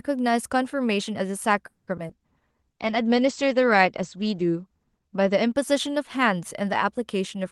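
Speech passed through an Opus call path with three faults. From 1.67 to 2.14 s, repeated packet loss causes a robotic sound. Four gaps are patched by stretching the last audio, and about half the span is filled in. From 2.12 to 5.61 s, a call bitrate drop makes the speech rougher and more muffled. Its top end falls from 12 kHz to 8 kHz, which fits an encoder forced from about 32 to 13 kbps. From 2.41 to 2.90 s, a jitter buffer slow-down plays the audio at 91 percent speed with the pitch unchanged. It adds 48 ms as the buffer rebuilds its reserve.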